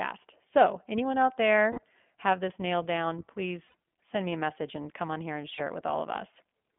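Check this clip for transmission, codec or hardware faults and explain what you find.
Two faults are present: the speech passes through the iLBC codec for its whole length, and lost iLBC frames break it three times.

The iLBC codec is in place from start to finish. The signal was squeezed through a narrowband telephone channel and coded frame by frame, each frame's excitation built independently of the one before. The band runs only from about 200 Hz to 3.4 kHz, so the speech is dull and boxy with no air at the top. The coding damage is plainly audible as a rough, slightly synthetic grain on the voice. The 20 ms frame rhythm and the density of detail fit iLBC's 15.2 kbps mode.

The lost iLBC frames occur at three points, each where packets failed to arrive and the decoder covered the gap by looping the last pitch cycle with added noise:

1.72 to 1.80 s, right after "anyone out" and before "have this nailed down", a 60 ms gap.
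3.68 to 3.74 s, after "have this nailed down" and before "send me a message", another 60 ms.
5.54 to 5.61 s, just after "come on here and", a 40 ms gap.

Each gap sounds like a brief, buzzy, held vowel. Because every iLBC frame decodes on its own, clean speech returns immediately afterwards with no smeared recovery.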